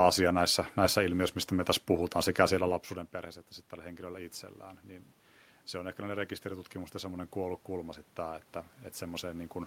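From 5.71 s to 9.58 s there is automatic gain rising. The input level falls by about 16 dB, and the gain control responds by lifting its gain gradually, by about 6 dB over nearly four seconds. Voice and room noise swell together, so the background noise grows in step with the speech. That shared rise marks it as a gain change rather than movement. The level shift near 2.5 s is the talker moving, not a system fault.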